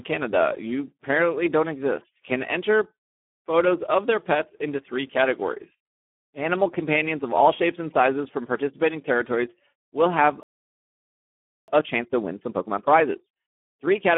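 A speech clip, heard through the Speex codec from start to finish. The coding damage is heavy. The voice is hoarse and noisy, which fits a low setting near 8 kbps. The band runs from 200 Hz to 3.5 kHz, like a phone line, and nothing is heard above 3.5 kHz. After "participating territories will have", a playback stall cuts the sound dead at 10.43 s. Silence lasts 1.25 s, until 11.68 s. The player most likely ran out of data or was briefly blocked. A time-compressed catch-up then runs from 11.68 s to the end. The audio plays about 1.25 times too fast at normal pitch. Small pieces are cut out and cross-faded to clear the backlog.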